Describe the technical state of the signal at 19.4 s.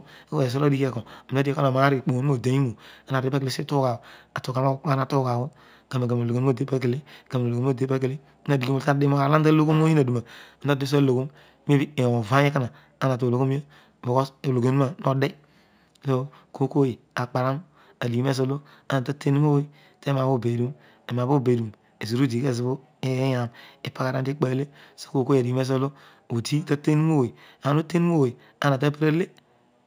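Imaging from linear upsampling is present at 19.4 s and throughout. Straight-line interpolation, which fits a rise from 16 kHz to 48 kHz, leaves faint mirror images between 8 kHz and 16 kHz, roughly 35 dB down, heard as a light metallic shimmer on sibilants.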